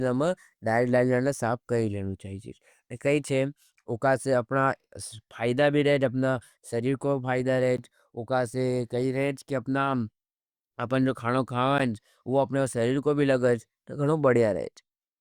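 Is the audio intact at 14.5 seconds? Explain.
Yes, the audio is intact at 14.5 seconds, with no audible fault at that moment.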